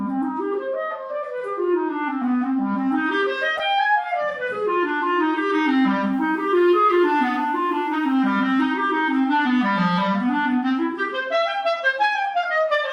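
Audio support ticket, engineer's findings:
Corrupt frame decoded, 3.57–3.60 s: short chirp-like blip, energy landing at wrong frequencies. Decoder played damaged compressed data; length points to about two frames. Unlike a dropout or click, the burst has misplaced tonal content, not silence or a single spike.

Low bit depth with dither, 6.13–8.15 s: steady, even hiss around 40 dB under the signal. Quantisation to 9 bits, dither turning rounding error into white noise. Unlike undithered truncation, there's no gritty distortion tracking the level, just constant hiss.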